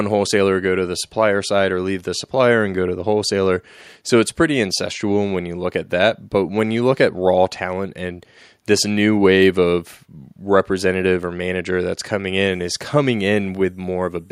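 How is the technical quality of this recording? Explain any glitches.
Nothing in this recording comes across as a glitch; it all sounds steady and even throughout.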